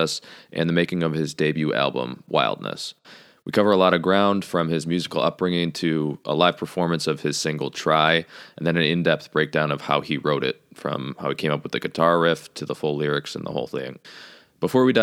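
No audible faults anywhere in the speech recording; nothing to report.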